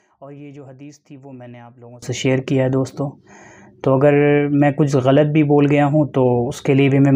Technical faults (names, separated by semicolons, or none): sudden gain jump